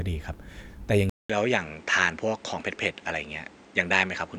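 Speech that goes silent for 200 ms at 1.10 s, then returns duller through to the end, with nothing above 8.8 kHz, a new background hiss well below the speech and no real change in level. The likely cause is the input switched to a poorer device.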